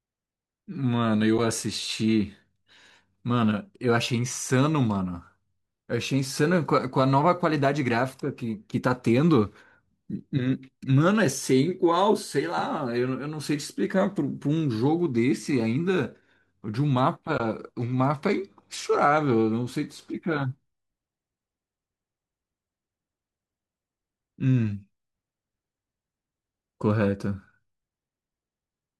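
At 1.38 s, a brief gap of about 10 ms opens in the speech. This is AAC frame loss with muting. A compressed audio frame failed to arrive, and the decoder filled it with silence. The overlapping transform windows blend the sound down and back up, so the hole has soft edges. A longer gap follows from 17.38 to 17.40 s, about 20 ms, which suggests two adjacent frames. Frames this short likely come from low-delay AAC, whose light compression is faintly audible.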